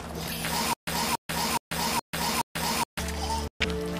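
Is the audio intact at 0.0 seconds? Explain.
Yes, the audio is intact at 0.0 seconds, with no fault present at that moment.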